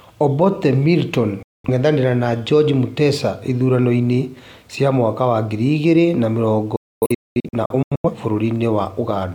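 At 1.43 to 1.69 s, then after "ngiri igĩrĩ na mĩrongo" from 6.76 to 8.10 s in scattered holes (longest 256 ms), a digital broadcast dropout mutes the speech with a 3 ms fade. The receiver discarded bad frames, leaving clean silence instead of concealment smearing.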